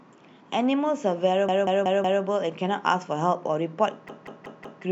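At 1.49 to 2.23 s and again at 4.09 to 4.83 s, a repeated buffer makes one 186 ms slice of speech play four extra times with hard joins, which fits an 8192-sample buffer. Unlike a dropout, there is no silence and no audio is lost.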